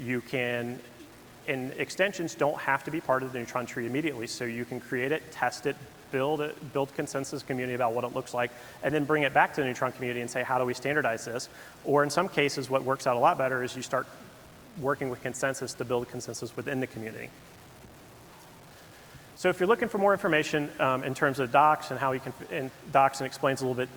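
Throughout the clip, the audio was likely truncated to 8 bits without dither, so the rounding error tracks the signal instead of forming a steady hiss. The result is low bit depth without dither: grainy distortion that shifts with the sound, roughly 25 dB below it, turning quiet passages gritty.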